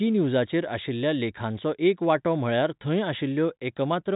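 No faults are audible in the speech, which sits in the ordinary G.711 telephone band with nothing above 3.8 kHz.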